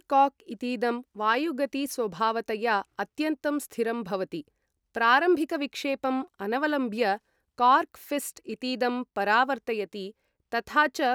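Nothing stood out on listening to this speech recording.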